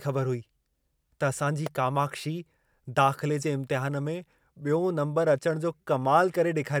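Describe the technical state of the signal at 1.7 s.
At 1.66 s a sharp snap sits on top of the speech: an electrical switching spike, over in a few milliseconds and peaking at around -15 dBFS. It is likely a nearby switch or motor arcing and the audio line picking up that burst. The surrounding speech carries on underneath, unbroken, which separates it from a dropout click, where the signal itself cuts out and leaves a gap rather than an added transient.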